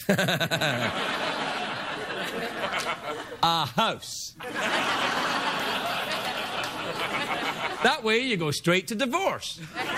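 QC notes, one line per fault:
2.35 to 9.84 s, clock drift buffer slips: a regular click recurs every 2.5 s, about four times, while sound is present. The likely cause is two devices on separate clocks roughly 70 ppm apart, with a handful of samples dropped or repeated at each slip.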